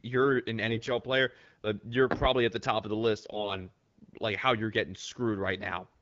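A speech clip carried over AMR-WB wideband, with two bursts of AMR bit errors: 0.66 to 0.90 s, between "you're an" and "player uh you're probably", and 3.32 to 3.56 s, after "top of the list". Flipped low-priority bits, at an error rate of several percent, misplace excitation pulses and corrupt fine pitch, gain and spectral parameters, so the voice holds pitch and level but turns hoarse, scratchy and gargly.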